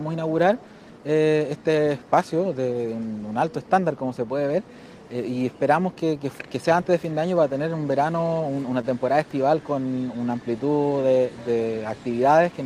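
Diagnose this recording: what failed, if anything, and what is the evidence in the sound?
The network path is at fault: a short stall from a late packet around 8.81 to 8.85 s. One packet showed up late and the jitter buffer emptied, so the receiver stretched the last sound by about 18 ms, holding it with a slight buzz or dip. Nothing is lost, and playback resumes right where it paused, just 18 ms later.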